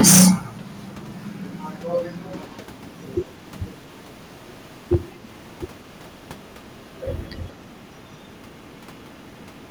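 Hard clipping opens the speech, from 0.01 to 0.31 s, where the signal is driven about 14 dB past what the chain can carry. The peaks are sheared flat, and the flattened tops throw harmonics high into the spectrum, giving a harsh fuzz across that first loud stretch. A milder instance at 4.93 s, overdriven by about 4 dB and lasting about 17 milliseconds, registers as a brief crackle on peaks.

A faint delayed copy of the speech, trailing it by 182 ms, appears from 2.38 to 2.57 s at around 30 dB below the direct sound. It returns in clustered scraps at 6.84, 7.15, 7.48, 7.99, 8.61, 8.95 and 9.19 s, the last ending near 9.67 s, mostly around 40 dB down. The fixed delay and fragmented, low-level returns point to echo leak, likely a far-end loudspeaker feeding a microphone whose echo canceller let residue through.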